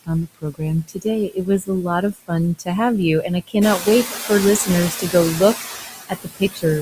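Throughout the recording the background sinks between phrases and swells back under them. These are noise suppressor artifacts: the suppressor lowers the bands it judges to be steady noise, by about 16 dB here, and re-decides every frame.

From 0.04 to 1.69 s, soft consonants and endings sound swallowed, dropping by up to about 21 dB over roughly half a second in total. This is speech cut by the noise suppressor, which mistook quiet parts of the speech for background and turned them down. The same happens more briefly from 2.13 to 2.68 s (up to about 16 dB) and from 3.23 to 4.3 s (up to about 13 dB). During that third stretch, around 3.5 s, the room noise rises by about 11 dB to sit about 9 dB below the speech. From 6.09 to 6.64 s the speech is cut again, by up to about 20 dB, over roughly a third of a second.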